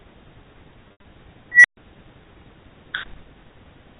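From 0.88 to 1.04 s there is packet loss with pitch repetition. About 120 ms of audio goes missing, spread over 160 ms, which fits roughly six packets of 20 ms. The receiver fills each hole by repeating the last pitch period. The shorter gaps sound like a held, buzzy stretch. The longest run lasts 80 ms. It fades toward silence before the speech returns through a brief cross-fade.

At 1.52 s an unstable filter takes over. A recursive filter with bad coefficients feeds its output back and keeps amplifying it. A squeal around 2 kHz swells for about 126 ms and clips. Then the numbers overflow. The sound drops out for 130 ms until the filter resets, at 1.77 s. Through the G.711 telephone path, nothing above 4 kHz is heard, so the squeal sits well inside that band.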